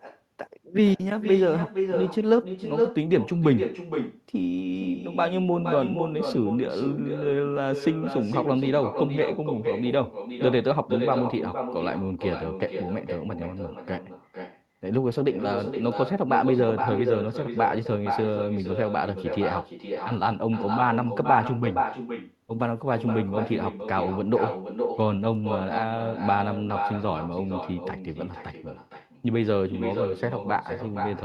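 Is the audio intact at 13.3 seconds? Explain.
No. At 13.3 seconds the speech carries an echo with no canceller, present throughout the clip. The far end's loudspeaker feeds its microphone, and nothing removes it. So every phrase returns about half a second later, a thinner copy at about 6 dB below.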